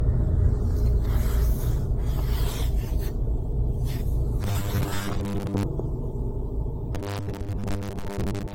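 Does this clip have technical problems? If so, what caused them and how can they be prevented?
Yes. Throughout, the sound is swirly and hollow, with blurred attacks and nothing above 16.6 kHz, likely generation loss from about four lossy re-encodes, which fits an AAC chain. Each pass re-quantises on a shifted frame grid, stacking noise and spectral holes. Keep a lossless master and encode only once.

From 4.43 to 5.63 s and from 6.95 s to the end, the audio turns into a rigid 100 Hz metallic buzz. That's likely robotic sound from repeated short buffers: a 10 ms chunk gets replayed while most of the real audio is skipped. Larger buffers or a faster audio thread would prevent it.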